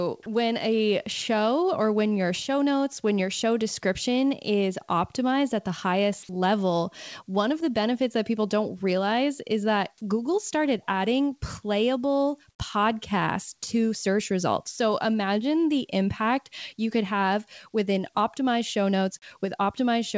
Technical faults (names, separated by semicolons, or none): comfort noise in place of the background